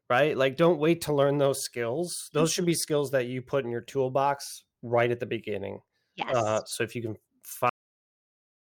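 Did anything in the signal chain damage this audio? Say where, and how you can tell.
Yes. The clip has a cut-off end, a storage or playback buffer fault: at 7.69 s the speech stops mid-sound and the signal falls straight to digital silence, which runs to the end of the file. The final buffers were never written out, so there is no natural decay or breath tail. On the waveform the envelope ends as a vertical edge onto a flat silent line; on a spectrogram every frequency band ends at once, followed by a completely empty region.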